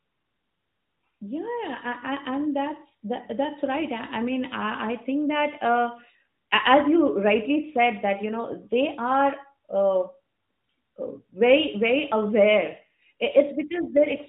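At 13.74 s, running to the end at 14.28 s, an AMR rate drop sets in: the speech turns rougher and more synthetic, which fits the codec falling from about 12.2 to 5.9 kbps. The narrowband ceiling near 4 kHz persists without any gap, but the spectrogram's harmonics smear.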